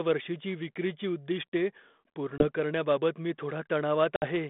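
A speech recording carried over a narrowband phone line limited to roughly 200 Hz to 3.6 kHz, consistent with light 32 kbit/s ADPCM, shows packet loss on an ADPCM call twice. At 2.38 to 2.47 s, just before "करण्याबाबत मी", about one packet (20 ms) drops to hard silence. At 4.16 to 4.26 s a few packets (60 ms) go. Unlike a plain dropout, the decoder's adaptive predictor and step size lose sync, so the audio after each gap returns slightly distorted and settles over tens of milliseconds.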